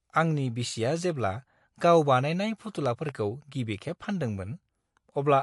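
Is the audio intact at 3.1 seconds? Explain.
No. From 2.86 to 3.11 s, two sharp pops, or a loud pop in two parts, sit roughly 10 dB above the speech, which carries on underneath. The likely cause is a sudden voltage step or pulse, such as a plug, switch, static or driver glitch, added to the signal and shaped by the circuits after it.

The same moment also carries plainly audible MP3 compression: the speech sounds watery and swirly, with nothing above 11.3 kHz. This likely comes from an encoder short of bits, which fits a bitrate around 52 kbps. It cuts the treble at a fixed point and drops weak frequency lines that flicker from frame to frame.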